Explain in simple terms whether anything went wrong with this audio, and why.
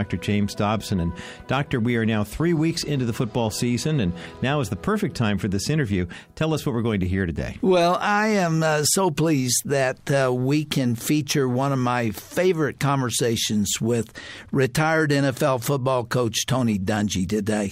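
Nothing went wrong here that I can hear; there's no glitch, dropout or odd noise anywhere in it.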